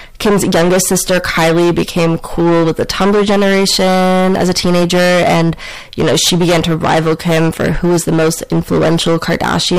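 Hard clipping runs through this speech clip from start to finish. The signal is driven about 17 dB past what the chain can pass. Roughly a third of the samples are cut flat. The flattened peaks add high harmonics, so every loud sound carries a harsh fuzz.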